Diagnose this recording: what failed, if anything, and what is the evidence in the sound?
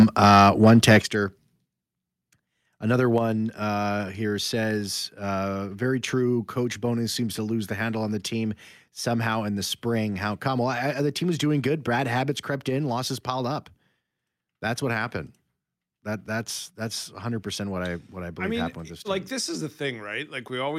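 Microphone overload runs from 0.0 to 0.98 s. The speech peaks are flattened, with a harsh, crackling edge on the loudest syllables. The signal sits about 5 dB beyond full scale, and around a few percent of samples are squared off. This points to the converter stage, likely from a microphone input level set too high, so the tops of the waveform hit the converter's ceiling and are cut away.

Microphone volume stepped down four times: at 0.03 s by about 3 dB, at 1.02 s by about 9 dB, at 3.18 s by about 3 dB and at 12.36 s by about 2 dB. Each is a sudden drop in both speech and background level, with no fade. The first two fall during or just after the distorted opening. This is call processing, likely automatic gain control reacting to the overload by lowering the device's input volume in single steps.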